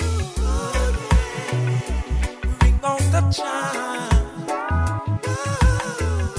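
No technical faults are audible.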